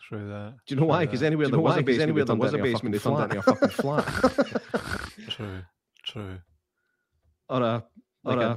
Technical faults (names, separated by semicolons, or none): doubled audio track